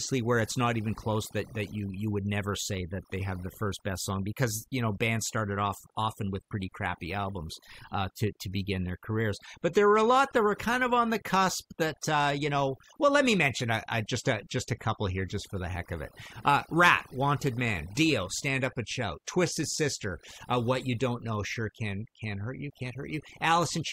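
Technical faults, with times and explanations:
Throughout, overdone noise removal: the noise reduction was pushed too hard on a noisy recording, so any frequency band sitting close to the processor's noise estimate is pulled far down or shut off entirely. The background drops and breaks up into twinkling, chirping specks where isolated bands flicker on and off. Quieter components of the speech fall under the same threshold and are stripped away.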